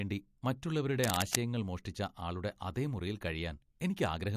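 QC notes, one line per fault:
1.04–1.35 s, cable scratch noise: a worn cable, connector or control in the chain was likely moved, and its contact resistance jumped about erratically for roughly a third of a second. Each shift in resistance modulates the signal path, so dense, irregular bursts of noise pile onto the speech at about the same loudness as the speech itself. The result is a brief scratchy rustle laid over the sound, ending just before "മോഷ്ടിച്ച ആളുടെ".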